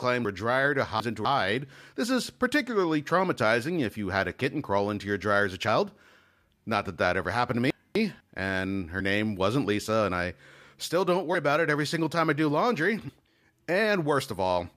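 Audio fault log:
0.25–1.25 s and 7.70–8.20 s, chunks out of order: a 250 ms chunk of the speech was delivered late, three chunks late in the first span and one in the second, so it plays after material that should follow it. Nothing is missing, but the sequence is scrambled.
8.99 s and 13.08 s, compressed frames skipped: whole compressed frames of about 23 ms each never reached playback, roughly two (about 50 ms) just before "name wasn't" and roughly three (about 70 ms) just after "time I do laundry". The speech jumps ahead.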